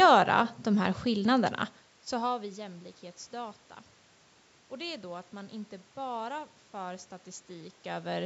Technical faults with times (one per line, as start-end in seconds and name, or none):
none